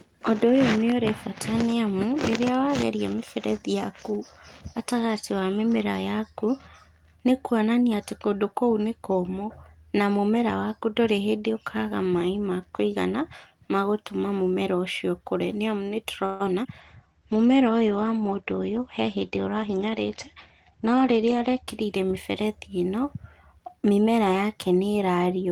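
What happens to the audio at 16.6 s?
Around 16.64 to 16.66 s there's a short concealed packet loss. About 41 ms of the speech never reached the decoder in time, and rather than stretching the audio to cover the gap, the receiver blended across it and jumped ahead, cutting the playout delay by roughly 40 ms. So you hear a quick smear or wobble right there, and a brief sound like a consonant can simply drop out.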